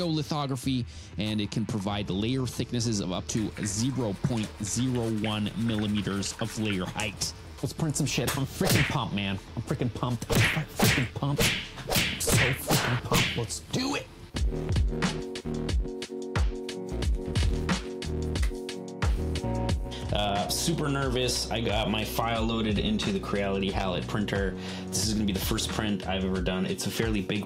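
Nothing in this recording catches the ear as a technical fault, so there's nothing to flag anywhere along its run.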